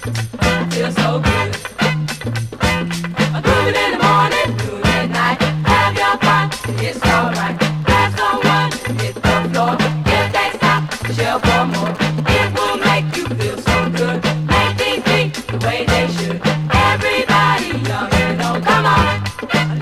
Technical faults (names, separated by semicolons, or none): GSM signalling bursts